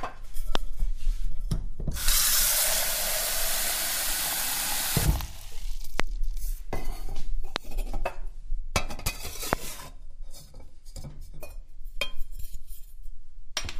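Four loud pops land at 0.55, 6.00, 7.56 and 9.53 s. Each lasts about 20 ms and rises well above the surrounding sound, the ones at 6.00 and 9.53 s slightly harder. Each is a single sharp thump, likely a brief voltage pulse from a switch, plug or static discharge. Unlike a dropout, the sound keeps running underneath. Unlike crackle, each is one isolated pulse rather than a dense run of tiny clicks.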